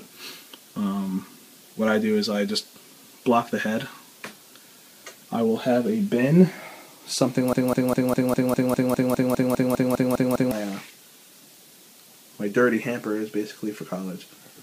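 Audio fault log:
7.53 to 10.52 s, broken-record loop: a chunk of about 0.2 s keeps playing back to back, 15 times in a row, so you get the same fragment stuttering for roughly three seconds with no variation at all. The likely cause is a stall somewhere in the player, encoder or stream, which just kept resending the last piece it had buffered. Whatever should have played in that stretch is simply gone.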